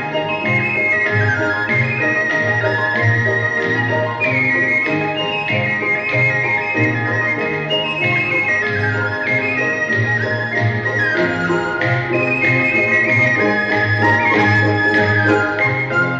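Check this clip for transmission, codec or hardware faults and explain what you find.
No transmission, codec or hardware faults are audible anywhere in the clip; the signal stays continuous and steady throughout.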